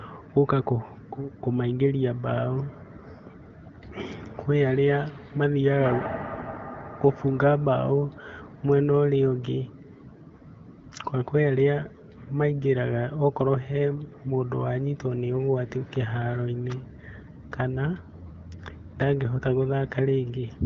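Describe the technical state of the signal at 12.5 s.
At 12.5 s the speech is intact, carried cleanly through the AMR wideband (HD Voice) codec at 12.65 kbit/s with only its light coding character and no fault at that point.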